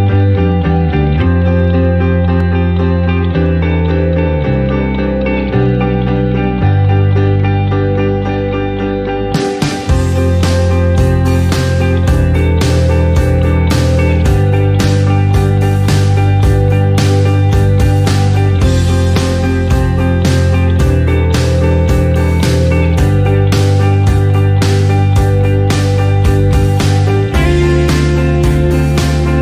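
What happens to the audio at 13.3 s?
At 13.3 s, as throughout the clip, the signal is driven about 2 dB past what a stage in the chain can pass, so its highest peaks are cut flat. This is hard clipping on only a tiny fraction of samples, adding upper harmonics heard as brief crackle on peaks.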